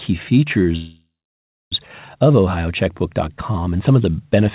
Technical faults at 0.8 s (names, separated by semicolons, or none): call audio freeze